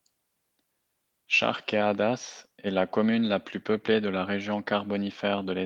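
No technical faults can be heard anywhere in this speech recording. Nothing in it calls for a time or a cause to be pointed out.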